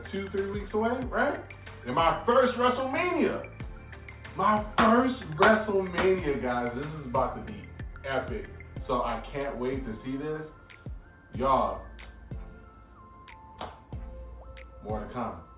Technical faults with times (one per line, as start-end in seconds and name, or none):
none